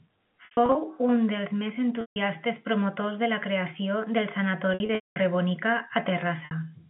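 Packet loss with pitch repetition breaks the speech four times: 0.45 to 0.75 s, just before "un dels més"; 2.01 to 2.16 s, between "un dels més" and "promotors de"; 4.74 to 5.16 s after "creació del", where the longest run lasts 210 ms; and 6.45 to 6.51 s. The receiver loops the last pitch period, so each gap is a held, buzzy tone fading toward silence, not the abrupt click of plain dropouts.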